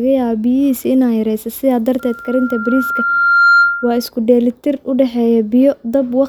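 From 1.99 to 4.11 s, loudspeaker feedback squeal: a single 1.4 kHz tone swells over about a second and a half to roughly 5 dB above the speech, unlike steady hum.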